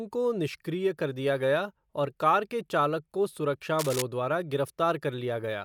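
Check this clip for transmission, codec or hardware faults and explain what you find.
One hardware fault is present, a burst of cable scratch noise. From 3.79 to 4.02 s, just after "के चालक को सुरक्षा", a worn cable or connector was likely shifted, making its contact resistance jump erratically for about a quarter of a second. That flickering contact injects dense, irregular noise into the signal path, heard as a scratching rustle laid over the speech at roughly 5 dB below the speech level.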